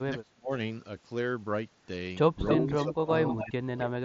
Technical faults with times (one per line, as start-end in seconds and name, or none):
0.09-0.51 speech suppressed in double talk
2.48-2.56 echo leak
2.58-3.12 speech suppressed in double talk
3.25-3.51 echo leak
3.37-4.04 speech suppressed in double talk
3.82-3.86 echo leak